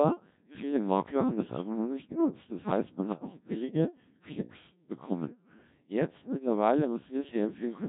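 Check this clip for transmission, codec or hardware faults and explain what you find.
One fault runs through the whole clip: Codec 2 vocoder coding, heavily damaging, consistent with a rate near 1.3 kbit/s. Sine-wave resynthesis from pitch and envelope makes speech robotic and buzzy; spectrograms show rigid harmonic stacks and nothing above 3.8 kHz.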